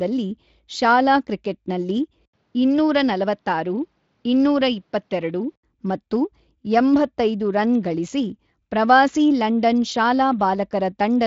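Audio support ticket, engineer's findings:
Speech dulls abruptly at 2.25 s, recovers at 5.63 s. Short dropout of about 80 ms at the switch. Likely cause: input switched to a poorer device. Band tops out near 6.9 kHz versus about 7.6 kHz in the surrounding Speex-coded speech, giving a boxier tone. Faint new background noise, well below the speech. Loudness holds roughly steady across both transitions. Fits a change to a lower-grade mic path, then back.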